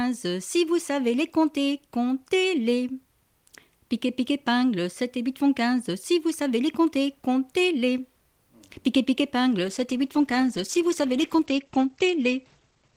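From 9.63 s to the end, the audio turns muffled and rough as highs above 8 kHz vanish, pointing to a call bitrate drop from about 32 to 15 kbps.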